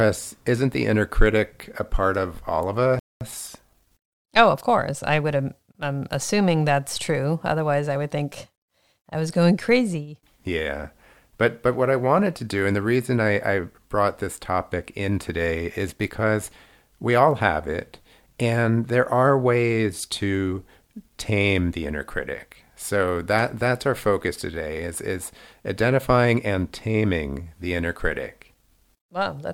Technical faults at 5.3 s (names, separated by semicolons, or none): time-compressed catch-up